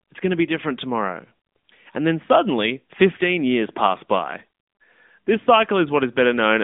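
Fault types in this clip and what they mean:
AMR narrowband mobile codec: The speech passes through a 2G/3G mobile speech coder that rebuilds each short stretch from a vocal tract model, a pitch predictor and a few pulses, so it sounds plainly buzzy and synthetic, at a level that fits a mid-range mode near 10 kbps. The band runs from about 200 Hz to 3.6 kHz, with nothing above 3.7 kHz. A simple telephone-band filter would cut the same range without adding that coded, artificial texture.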